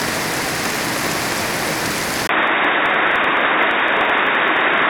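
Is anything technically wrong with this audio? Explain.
Yes, two faults are audible.

Filter restarted on every block, throughout: a filter loses its memory at each block boundary and restarts from zero, so every block opens with a small transient. The result is a steady tick or buzz at about 23.4 Hz, which fits a 2048-sample block, rising and falling with the sound's level.

Input switched to a poorer device, from 2.27 s to the end: after a 20 ms gap, the audio drops by about 5 dB, narrows in bandwidth and turns dull and boxy, with new background noise well below the signal. The likely cause is a change to a narrower-band microphone or a headset's call profile.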